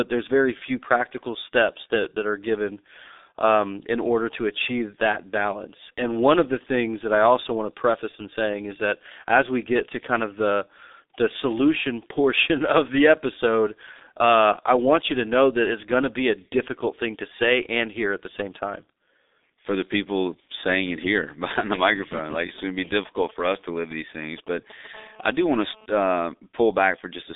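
A speech recording carried throughout by the G.723.1 codec, heavily damaged: the line band runs from 250 Hz to 3.7 kHz with nothing above 3.8 kHz, so the voice is muffled and hoarse, consonants smear, and the coarse, slowly updated spectral model points to a low-rate stream of around 6 kbit/s. Just after "behind the", from 22.03 to 24.95 s, GSM signalling bursts appear: a galloping dit-dit-dit of short 217 Hz buzzes, roughly 20 dB below the speech, from a nearby 2G handset exchanging signalling whose radio pulses the audio circuit rectifies. From 24.95 to 25.86 s this turns into continuous GSM phone buzz, a hard, harmonic-rich 217 Hz rasp about 29 dB below the speech, matching the steady burst rate of that phone in an active call.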